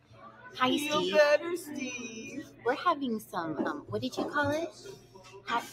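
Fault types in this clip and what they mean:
Noise suppressor applied to music or sounds: a speech-oriented suppressor treats steady and decaying content as noise, so gain swings by around 15 dB and the sound pumps, flutters or thins out.
Sound cut by the noise suppressor: held or fading sound sinks by about 14 dB near 0.0–0.57 s, 11 dB at 2.43–2.66 s, 12 dB at 4.71–5.48 s.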